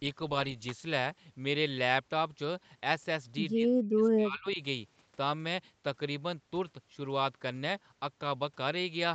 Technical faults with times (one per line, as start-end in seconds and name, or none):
0.69-0.71 electrical switching spike
3.54-4.59 speech suppressed in double talk